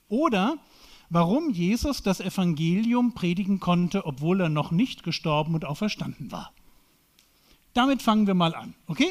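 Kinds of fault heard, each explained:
Short stall from a late packet: around 3.79 to 3.85 s the sound hangs on itself for a moment, one instant held a touch too long with a faint buzzy or slightly dipped quality, then it carries on exactly where it left off with nothing skipped. A packet turned up late, the jitter buffer ran dry, and the receiver stretched the last audio for about 34 ms to cover the wait, so everything after plays about 34 ms later.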